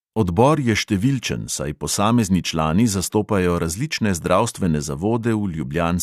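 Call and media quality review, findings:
No technical faults detected in the speech signal under review; level, continuity and timing show nothing requiring action on the call or media path.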